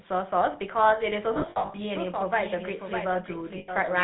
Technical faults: GSM full-rate codec; lost GSM frames; doubled audio track

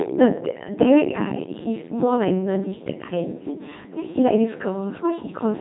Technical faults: Codec 2 vocoder

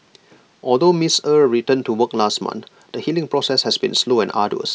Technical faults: none

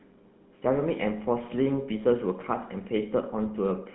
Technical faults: GSM full-rate codec

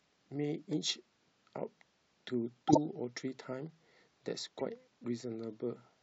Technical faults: corrupt frame decoded

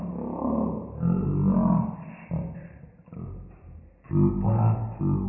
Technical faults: wrong sample rate

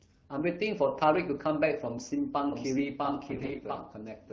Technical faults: doubled audio track; AMR bit errors

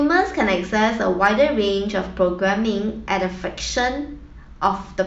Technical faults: hard clipping

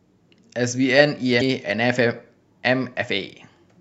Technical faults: damaged data in a compressed stream

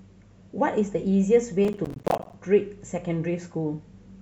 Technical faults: processor overload crackle

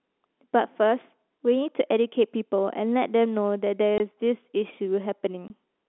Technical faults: packet loss filled with silence

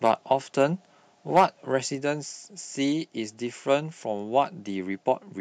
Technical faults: microphone overload; microphone volume stepped down

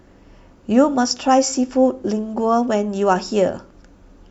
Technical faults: none

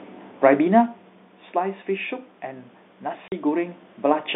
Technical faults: automatic gain rising; packet loss filled with silence

